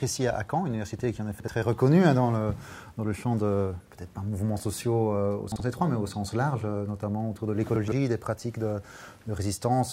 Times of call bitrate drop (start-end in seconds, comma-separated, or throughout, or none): none